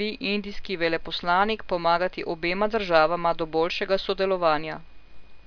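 No technical faults are audible.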